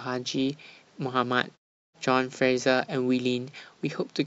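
No technical faults can be heard in the speech; the background drops to silence in the pauses and comes back in time for each phrase, which is the intended behaviour of the processing.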